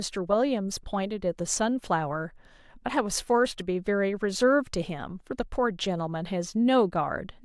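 No technical faults can be heard in this recording.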